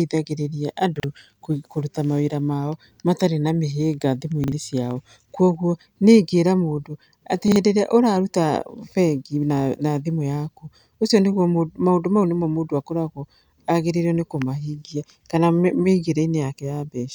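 At 0.96 s, 4.44 s (after "mao matarĩ na mĩhĩnga") and 7.48 s (between "ingĩra mũndũ atĩ" and "ĩrĩa ũraruta"), chunks out of order: one 40 ms chunk plays a chunk late, swapping 80 ms of speech into a jumbled blip. The waveform shows hard discontinuities at each join, and the spectrogram shows vertical broadband lines there.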